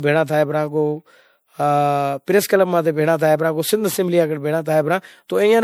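From start to finish the speech carries generation loss. It sounds swirly, smeared and hollow, and attacks blur. The likely cause is repeated MP3 encoding, around four passes, each quantising on a shifted frame grid. The damage is worse than 96 kbit/s alone would explain.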